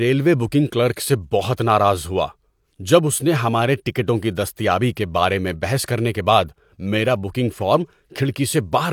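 No technical faults are audible.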